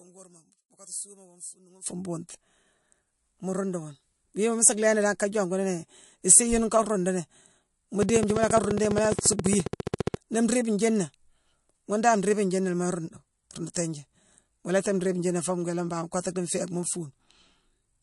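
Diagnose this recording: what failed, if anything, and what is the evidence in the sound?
Throughout the speech, MP3 compression smears the sound with a watery swirl; a spectrogram shows a hard ceiling at 11.3 kHz, likely a codec stage at a low bitrate near 53 kbps.

From 0.0 to 1.86 s, one channel inverted leaves the mono sum about 13 dB quieter; the waveform shrinks, likely a reversed-polarity wiring fault.

From 8.03 to 10.15 s, a train of clicks ticks regularly at 14.7 per second, about thirty, peaking roughly 10 dB above the sound; these are vertical spectrogram lines, likely from a faulty connection or power supply.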